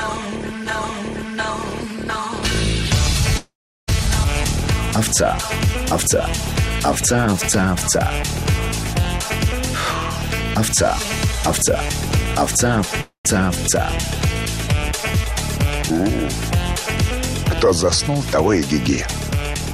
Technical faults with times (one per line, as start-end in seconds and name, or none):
3.37-3.90 call audio freeze
4.24-4.26 skip ahead
5.67-9.05 jitter buffer slow-down
9.25-12.86 jitter buffer speed-up
13.01-13.27 call audio freeze
19.55-19.74 jitter buffer speed-up